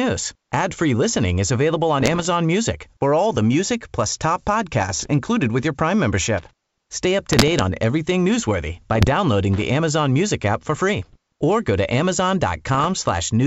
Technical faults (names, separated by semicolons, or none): bit errors on an ADPCM link; loose connector crackle